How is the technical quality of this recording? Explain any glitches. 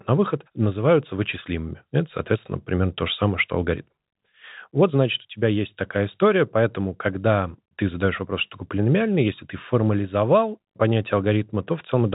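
No glitches to report here. The speech comes through a call-style path with nothing above 4 kHz, which fits a G.711 mu-law connection and is just how that kind of line is supposed to sound.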